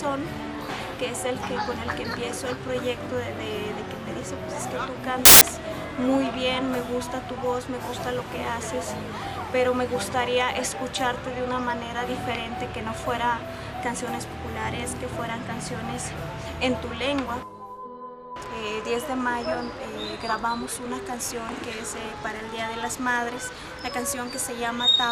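Samples built from the wrong bytes from 5.25 to 5.41 s: each sample's bytes are misassembled, so the low bits dominate and a burst of loud, harsh broadband noise replaces the sound.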